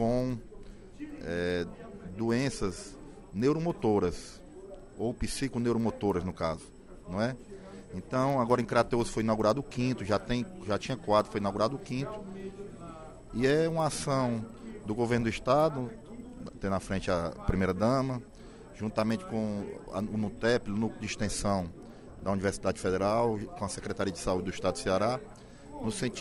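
A resampler restarted on every block, converting 24 kHz to 48 kHz in 100 ms chunks, leaves ticks at 10 Hz throughout, seen as thin vertical spectrogram lines wherever signal is present.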